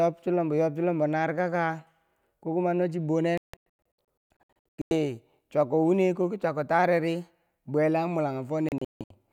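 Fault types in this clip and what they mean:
digital broadcast dropout: receiver muting on failed frames; after "ko kuma nochi" and near the end, flat-line gaps up to 160 ms appear as blank spectrogram columns.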